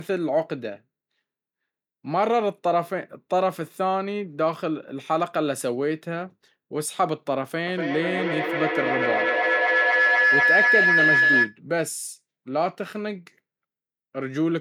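From 7.67 to 11.58 s a feedback howl builds as the microphone-to-loudspeaker loop gains level each pass, peaking about 4 dB above the speech. It settles near 1.5 kHz and pulses roughly every 200 ms, showing as a bright horizontal spectrogram line and a swelling, throbbing waveform envelope.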